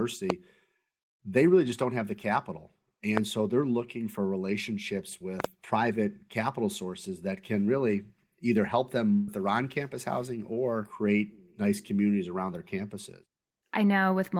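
Loud pops land at 0.30 to 0.32 s, at 3.17 to 3.19 s between "don't have the capital" and "so they're looking for", and as a double pop at 5.40 to 5.47 s after "they're looking for relationships". Each is a sharp transient roughly 15 to 20 dB above the speech, which continues underneath. The likely cause is a voltage step from a connector, switch or driver glitch.

A burst of packet loss at 9.13 to 9.29 s, after "can really either help", drops about 140 ms of audio. The receiver fills the gap by extending and fading the last sound, then resumes at "their on campus housing" with that stretch missing.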